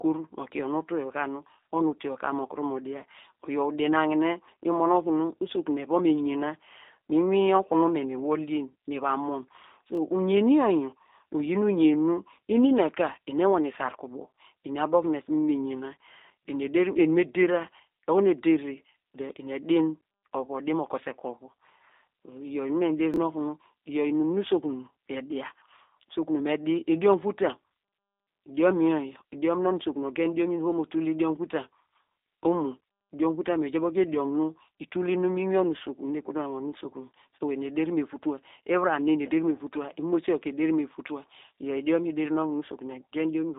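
Speech carried through the G.729 codec: nothing above 3.8 kHz, a 250 Hz to 3.7 kHz line band, and plainly audible rough, synthetic coding consistent with 8 kbit/s G.729A. Chunks out of order occur at 9.95–9.97 s and 23.14–23.17 s, where roughly 11.6 ms segments play one and two positions late, producing brief jumbled moments.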